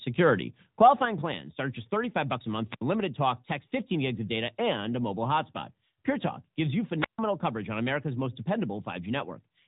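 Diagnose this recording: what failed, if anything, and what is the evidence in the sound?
The codec stage failed: this is AMR narrowband mobile codec damage throughout the speech. The band stops sharply near 3.8 kHz with nothing above it, consistent with 8 kHz sampling. The voice has a plainly audible buzzy, synthetic quality, which fits a mid-rate AMR-NB mode around 10.2 kbps. The codec rebuilds speech from a vocal-tract model driven by a few pulses per subframe, so fine detail is replaced by that coarse excitation.

A microphone volume step down occurs at the call-processing stage at 1.05 s, just before "plans start at just". The level falls by about 5 dB in a single instant, with no ramp. This is likely the call software's gain control deciding the microphone input was too hot and lowering the device input volume in one step. The result is an abrupt shift in level.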